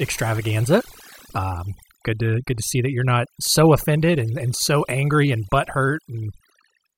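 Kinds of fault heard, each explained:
Overdone noise removal: over-aggressive noise reduction throughout strips quiet parts of the speech; the spectrogram shows patchy holes and isolated specks where background noise was.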